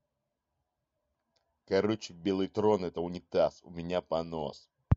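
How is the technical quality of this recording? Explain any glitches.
The technical quality of the recording is sound, with no glitches to explain.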